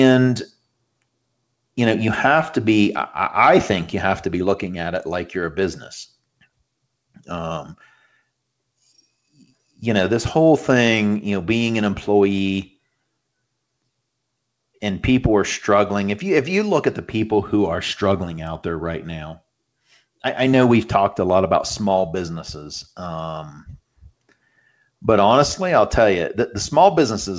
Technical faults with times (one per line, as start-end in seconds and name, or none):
none